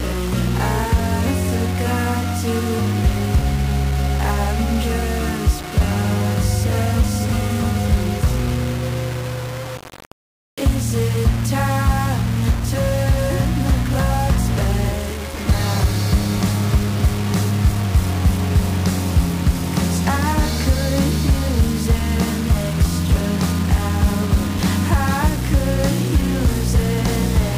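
Low bit depth without dither runs throughout: grainy distortion that tracks the sound, with the error only about 15 dB below the signal. This likely comes from rounding to roughly 4 bits.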